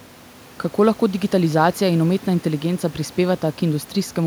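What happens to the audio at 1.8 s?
At 1.8 s the speech is intact, with only the room's own background noise sitting about 26 dB below it.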